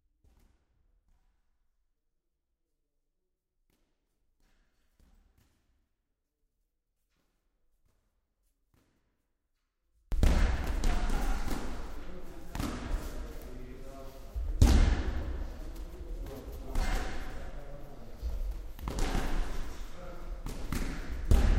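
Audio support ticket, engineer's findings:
0.00–10.12 s: sound collapses to a near-silent residue, level down about 39 dB. Likely one channel inverted, so the shared content cancels in the mono sum. Unlike a dropout, only the centre is lost, and a difference residue remains.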